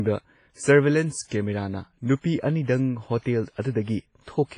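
Throughout the speech, the sound is ringing and washy, with a hiss that swells and fades along with the voice. Nothing is heard above about 10.5 kHz. This is likely WMA compression at a low bitrate. Heavy transform coding smears quantisation noise over tens of milliseconds and drops weak detail.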